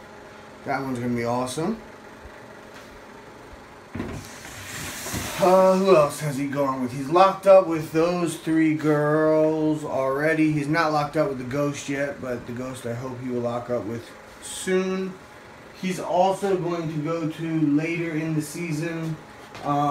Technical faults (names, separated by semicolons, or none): none